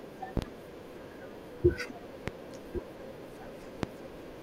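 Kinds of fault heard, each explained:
Loud pop: a brief electrical pulse, likely from a plug, switch contact, static discharge or driver glitch, added on top of the signal and shaped by the downstream circuitry into a sharp transient. Three occur in this speech clip: a double pop at 0.37–0.46 s, then single pops at 2.28–2.31 s and 3.83–3.87 s. Each peaks roughly 25 dB above the speech, which continues uninterrupted underneath.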